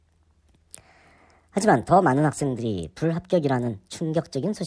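A speech recording was played back at the wrong sample rate throughout, with no conversion, which fits 16 kHz audio running at 22 kHz. Everything moves 1.38 times too fast and sits about 5.5 semitones high, so the voice sounds hurried and chipmunk-like.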